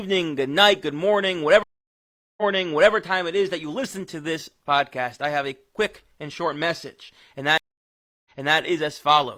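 A speech clip with two stream reconnects: the connection dropped and the player restarted its decoder mid-stream. After "good night good morning" (1.63–2.93 s), about 0.75 s of silence, then playback resumes 0.56 s earlier; after "quick and short message" (7.58–8.58 s), 0.68 s of silence, resuming 0.33 s back.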